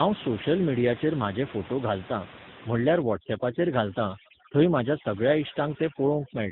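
A speech recording, passed through tandem speech coding for its whole length. Nothing is heard above 3.8 kHz. The rough, muffled, warbly tone fits two speech codecs in a row, ending in AMR-NB at around 7.95 kbit/s. From 3.02 s to the end at 6.52 s, overdone noise removal takes hold. The room noise, about 14 dB below the speech, drops and breaks up into twinkling specks.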